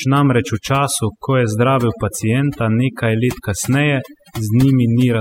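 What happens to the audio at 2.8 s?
At 2.8 s you're hearing overdone noise removal, which runs through the whole clip. The denoiser was pushed too hard, so it's gating off frequency bands near its noise estimate and taking quiet speech detail with them. The result: a background that drops away and breaks up into twinkly specks.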